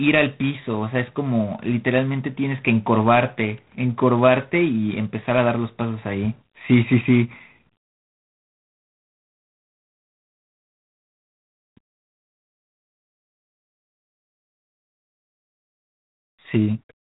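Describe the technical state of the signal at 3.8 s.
At 3.8 s the speech carries a harsh, rasping hiss that rises and falls with its level, and nothing above about 3.9 kHz comes through, so the sound is thin and boxed in. This is G.726 ADPCM damage, present throughout the clip. The codec sends only a few bits per sample describing the difference from an adaptive prediction, and the coarseness heard here fits the 24 kbit/s mode, where quantisation noise tracks the signal closely.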